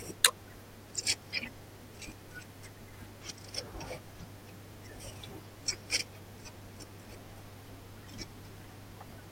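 A speech clip with mains hum throughout: a steady 50 Hz tone, fairly loud beneath the voice, drawn as an unbroken horizontal line on a spectrogram, likely from a ground loop.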